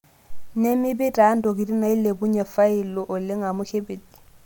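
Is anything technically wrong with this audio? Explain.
No, nothing technically wrong can be heard here.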